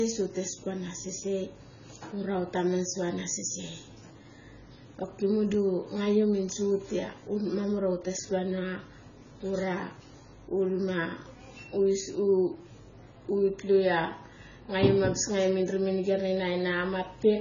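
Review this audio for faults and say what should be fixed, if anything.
Throughout the speech, nothing is present above 7 kHz, and the sound is dull and smeared, with a warbling, fizzy texture on sibilants and sustained sounds. The likely cause is heavy AAC compression (AAC-LC), where a very low bitrate, around 16 kbps, forced a lowered cut-off and coarse spectral quantisation. Encode at a higher bitrate or keep an uncompressed source for processing.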